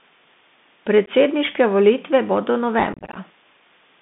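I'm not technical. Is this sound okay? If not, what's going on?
No. Three problems can be heard.

First, low bit depth with dither. The recording was stored with very few levels of loudness, about 8 bits' worth. To hide the roughness, random noise was added. So a steady, even hiss sits under the whole clip.

Second, the Bluetooth CVSD headset codec. This is the old, basic way headsets send voice. It passes only roughly 150 Hz to 3.6 kHz, so speech sounds thin and muffled. S sounds turn scratchy, with a grainy hiss underneath.

Third, unconcealed Bluetooth headset packet loss. Small chunks of sound went missing between headset and phone, and nothing filled the gaps. There are brief holes at 1.06 to 1.09 s. After "volitve bodo", from 2.93 to 3.17 s, many tiny gaps make the voice sound chopped and crackly.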